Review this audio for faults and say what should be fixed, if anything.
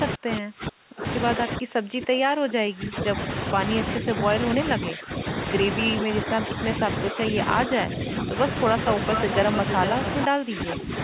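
The speech dips, thins and drops out in pieces at 0.16–3.16 s, 4.0–4.07 s, 4.76–5.25 s, 6.04–6.49 s, 7.12–8.3 s and 10.27–10.92 s. The opening stretch sinks by roughly 30 dB, and the later ones by smaller amounts. This is likely speech suppressed in double talk: with both ends talking at once, the echo canceller could not tell the near talker from loudspeaker echo and turned everything down. The call path is narrowband, with nothing above 4 kHz. To prevent it, tune the echo canceller's double-talk detection so it keeps near-end speech open while both sides are active.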